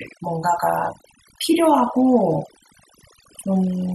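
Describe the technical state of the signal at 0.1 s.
At 0.1 s the speech shows overdone noise removal, present throughout the clip. A noise reduction stage set too aggressively is cutting individual frequency bands whenever they sit near its noise estimate. Quiet speech detail is lost with them, leaving near-silent gaps with twinkling specks.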